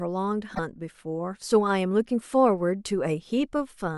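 Damaged data in the compressed stream at 0.51 to 0.60 s: corrupted frames make the decoder lose sync and hunt for the next header, giving a brief chirp, squawk, click or short hole.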